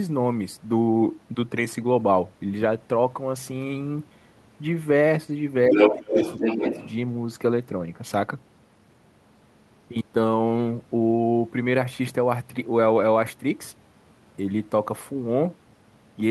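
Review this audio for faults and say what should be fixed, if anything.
Speech suppressed in double talk occurs from 5.70 to 6.21 s, where the talker drops by roughly 15 dB for about half a second, and again from 6.39 to 6.74 s, a shallower dip of around 5 dB. This is likely the echo canceller turning down the microphone path while both sides talk, because it cannot separate the talker from the loudspeaker echo. Tuning the canceller's double-talk detection so it keeps the near-end path open during overlap would prevent it.

The other side's voice is leaking through from 5.72 to 6.92 s, arriving at roughly the same level as the talker and overlapping both suppressed stretches. The likely cause is residual loudspeaker echo that the canceller failed to remove from the microphone signal. Better acoustic isolation or a headset, plus stronger residual-echo suppression, would prevent it.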